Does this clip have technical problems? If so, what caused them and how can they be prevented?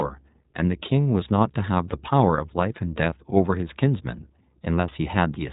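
Yes. The speech runs through the iLBC codec for the whole clip. Nothing above 4 kHz survives, and the voice has a plainly audible rough, buzzy, synthetic edge, which fits the 15.2 kbps mode coding each 20 ms frame on its own. A plain low-pass filter would dull the sound without that grainy texture, and a harsher codec such as GSM would sound more metallic. Using a wideband codec, or a higher-quality one, would prevent it.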